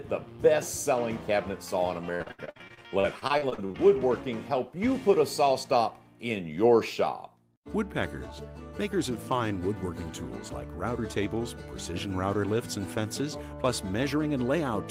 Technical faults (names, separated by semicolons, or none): repeated packet loss (robotic sound)